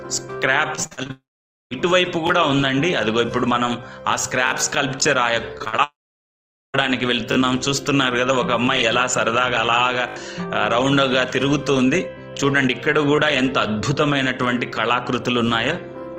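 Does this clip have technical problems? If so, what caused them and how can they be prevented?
Yes. Repeated packet loss (robotic sound) occurs at 0.75–1.11 s and 5.59–5.80 s. Short holes of up to about 50 ms are patched by stretching the previous sound, leaving a choppy texture with pieces missing, unlike a single continuous gap. A steadier connection with forward error correction and a larger jitter buffer would prevent this.

A long network dropout follows each burst, at 1.11–1.73 s and 5.84–6.76 s. The sound smears into a fading buzz and then goes silent for about half a second and about 0.8 s, likely because the stream stopped arriving. Unlike the choppy loss, nothing returns until the stream resumes further on. A more reliable network link, with redundancy or retransmission, would prevent these outages.

A repeated buffer occurs at 2.27–2.29 s, 4.47–4.51 s, 7.32–7.36 s, 10.08–10.16 s and 13.16–13.18 s. 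The same tiny slice replays with hard joins, which fits a 20 ms buffer. These are brief clicky stutters of exact repeats rather than smeared concealment. Larger audio buffers and a playback thread that isn't starved of processing time would prevent them.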